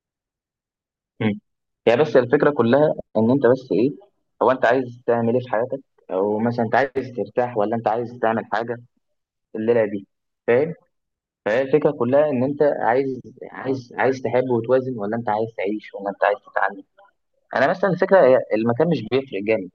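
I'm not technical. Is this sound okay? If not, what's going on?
Yes, it sounds fine.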